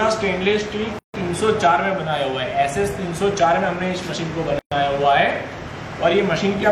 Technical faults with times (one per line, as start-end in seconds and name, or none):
0.99-1.14 gap at a join of encoded pieces
4.59-4.72 gap at a join of encoded pieces